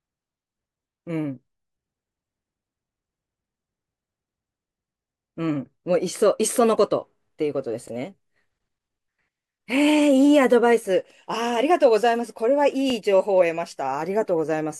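At 7.88 s and again at 12.90 s, a tiny stutter breaks the speech. Each one is a brief click where about 23 ms of sound plays twice. These are overlapping chunks. The audio was handled in pieces about 5 s long, and each piece began slightly before the previous one finished, so the seam repeats a sliver. A dropout would leave a gap, but here sound is doubled, not missing. The regular 5 s spacing points to a chunking error rather than random glitches.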